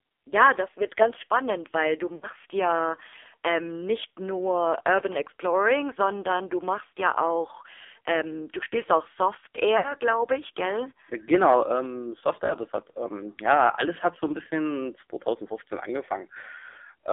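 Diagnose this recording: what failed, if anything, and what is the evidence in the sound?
The codec stage failed: the speech went through the AMR narrowband mobile codec. Nothing sounds outside 300 Hz to 3.6 kHz, and the speech is heavily buzzy and synthetic, which fits a low mode around 5.9 kbps. A spectrogram shows a hard ceiling near 3.6 kHz and smeared, blocky harmonics.

At the network stage, lost AMR speech frames occur at 2.16–2.27 s, 9.78–9.94 s, 12.46–12.54 s and 16.70–16.78 s. The decoder reused the last good parameters with falling gain, so each gap sounds drawn out, warbles and fades, which fits two or three missing 20 ms frames. On the waveform, the envelope sags and then recovers.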